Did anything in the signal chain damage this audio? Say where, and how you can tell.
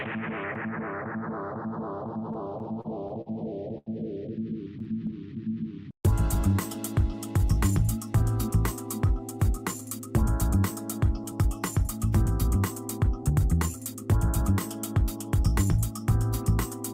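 Yes. Repeated stalls (stutter) at 2.07 to 3.29 s and again at 4.79 to 5.15 s come from the network and jitter buffer stage. The first span has nine brief holds totalling 145 ms, the longest 45 ms. The second has four totalling 35 ms, none over 10 ms. Packets kept arriving late, the buffer kept running dry, and the receiver stretched the last sound each time. Nothing drops out, but the audio catches and drags.

A short stall from a late packet at 3.78 to 3.89 s is a single 84 ms hold. One packet missed its playout time, so the receiver sustained the previous sound until it arrived and then resumed from the same point. No audio is lost. You hear one sound held too long, and the playout delay grows by those 84 ms afterwards.

A jitter buffer slow-down runs from 4.72 to 7.69 s. Playback drops to about 94% of normal speed while pitch holds steady, adding 176 ms over the span. The buffer was short of reserve, so the receiver padded it by repeating single pitch periods and slivers of pauses. 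The result is a drawn-out, slightly sluggish stretch that overlaps the second stutter burst.

Jitter buffer speed-up appears three times: 9.58 to 10.57 s at about 104% speed, 11.24 to 12.58 s at about 103%, and 13.04 to 14.52 s at about 106%. The first two each trim a few tens of milliseconds, and the last trims about a tenth of a second. Excess buffered audio, probably from late packets arriving together, was cut away a pitch period at a time. Pitch stays put while the pace quickens, turning hurried in the last span.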